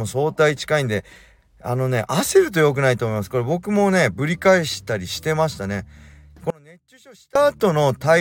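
From 6.50 to 7.35 s, audio dropout to a faint residue, likely upstream signal loss: speech cuts abruptly to a faint residue, not silence.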